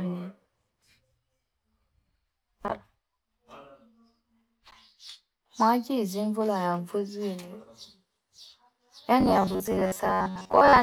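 From 9.21 s to 10.82 s, the speech turns into a robotic sound from repeated short buffers. The voice becomes a stiff, metallic buzz at about 93.8 Hz, which still loosely follows the words. That pitch points to one short slice of about 10.7 ms being replayed over and over. The likely cause is new audio arriving too slowly, with the last slice looped to cover the gap. About half the audio in that stretch appears to be repeats rather than fresh sound.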